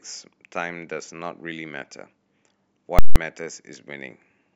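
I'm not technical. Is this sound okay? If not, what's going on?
No. From 2.99 to 3.16 s there are invalid numbers at full scale: a calculation broke and pinned the output at its loudest possible level. Unlike a simple dropout, the gap is bracketed by two very loud pops, with nothing audible between them.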